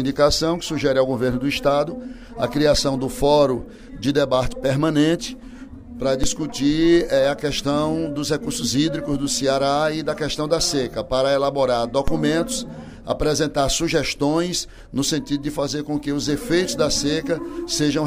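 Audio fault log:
6.24 s and 12.08 s: DC step. The waveform's zero line jumps suddenly by about -9 dBFS and then drains back over a few tens of milliseconds through a roughly 5 Hz high-pass, giving a low thump. On the waveform it appears as an offset with a decaying tail, and on the spectrogram as a brief broadband smear concentrated at the bottom.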